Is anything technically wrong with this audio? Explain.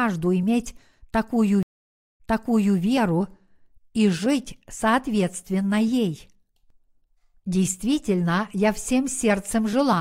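Yes. At 1.63 to 2.78 s, a stream reconnect: the connection dropped and a fresh decoder restarted mid-stream, leaving 0.57 s of silence before the speech resumes 0.58 s earlier, repeating a stretch.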